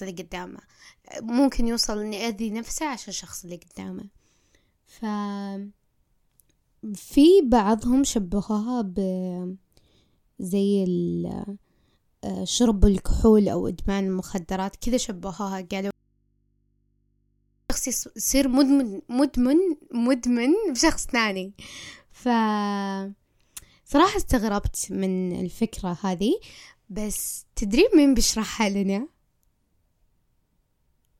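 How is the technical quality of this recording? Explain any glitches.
The recording has one clear glitch: an audio dropout to a faint residue in the middle of the speech. From 15.91 s to 17.70 s, about 1.8 s, the speech cuts off abruptly and only a low mains hum remains, roughly 45 dB below the speech level. The likely cause is a momentary loss of the signal feed while the input stayed live, so the open input picked up hum instead of going silent. On a waveform the envelope collapses to a thin flat band with sharp edges at both ends. A spectrogram shows the speech energy vanishing and only narrow horizontal hum lines at the low end.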